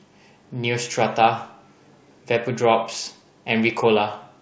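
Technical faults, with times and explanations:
Nothing here needs flagging: the speech came over a call link, which is why nothing sits above about 8 kHz, and that top end is simply how the connection carries it.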